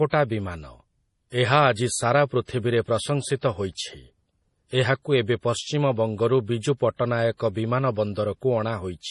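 Right from the start the speech has that watery, swirly MP3 compression sound. Nothing comes through above about 11.3 kHz, and the s sounds chirp and go metallic as weak frequency lines flicker on and off between frames. That much damage points to a starved encoder, likely something around 32 kbps, where the bit budget forces the treble cut and throws away the quiet detail.

At 3.41 s there's a pre-echo: a hiss about 17 ms long sits just ahead of a sharp onset, and the attack itself comes out soft and smeared. It happens again at 6.98 s, right after "ଏବେ ପଶ୍ଚିମ ବଙ୍ଗରୁ ବିଜୁ", with the same 17 ms of hiss. The codec spreads the noise meant for the loud attack across its whole block, so it leaks into the quiet moment before the attack.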